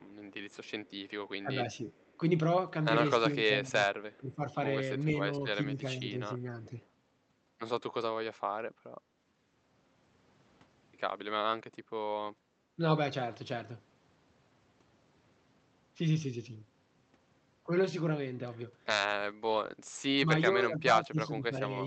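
A faint, delayed copy of the speech trails behind it from the start to 2.16 s, and returns as brief scraps at 4.12–4.17 s and 6.83–6.87 s. It lags by 462 ms and sits about 35 dB below the main voice. This is an echo leak: the far end was likely playing the call over a loudspeaker, and its echo canceller let some of that playback back into the microphone and return it. In several places the talker's own voice dips or thins while the other side is also active: 1.43–1.87 s (a shallow dip of roughly 5 dB over about 200 ms), 3.45–6.79 s (about a second of dips reaching roughly 15 dB), 12.76–12.81 s (a brief drop of roughly 10 dB), and 20.53 s to the end (down by roughly 15 dB). This is speech suppressed in double talk. The echo canceller likely could not tell the local talker from loudspeaker echo and turned everything down together. The room sound also dips sharply at 12.39–12.48 s, falling by about 10 dB for roughly 100 ms before recovering. 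That is background gated by the echo canceller, which clamped the microphone while the loudspeaker was active and then released it. Throughout, the audio carries the coding texture of an Opus call path, with the high end rolled off at about 8 kHz.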